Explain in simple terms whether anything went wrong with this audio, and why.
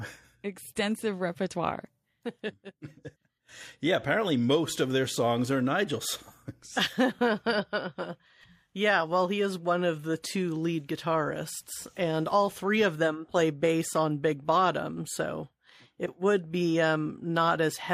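Nothing went wrong here: no dropouts, clicks, distortion, pitch or timing faults turn up anywhere in the recording.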